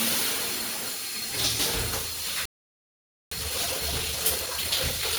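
Throughout, the everyday sound has a swirly, hollow quality with smeared, softened attacks, more degraded than a single 128 kbit/s MP3 pass would leave. This points to generation loss, likely from the audio being decoded and re-encoded as MP3 around ten times. Each pass re-quantises on a shifted frame grid, so noise and spectral gaps build up from one generation to the next.

At 2.46 s the sound cuts out abruptly in mid-flow and stays silent for about 0.86 s, resuming at 3.31 s. This is a playback stall. The output went quiet because the player likely ran out of data or had its audio thread blocked, and nothing reached the output until it recovered.

From 3.31 s to the end at 5.18 s the sound is audibly hurried, running at 1.25 times normal speed while keeping its pitch. This is time-compressed catch-up. After the stall, the player works through its backlog by dropping short slices of audio and cross-fading across the joins. 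That shortens the material without transposing it.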